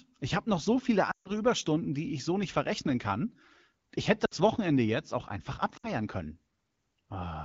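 At 1.11–1.32 s, after "habe noch so viele", then 4.25–4.34 s and 5.77–5.90 s, after "jetzt auch einfach", lost AMR speech frames make the decoder smear the last sound into a quick fade to near silence rather than cutting cleanly to silence.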